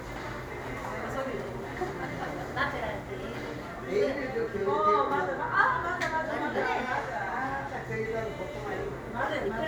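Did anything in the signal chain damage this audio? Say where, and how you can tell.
No, nothing stood out on listening that points to any stage of the signal chain having damaged this audio.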